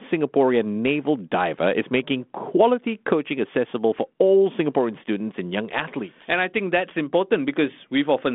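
No technical faults are audible in this speech recording.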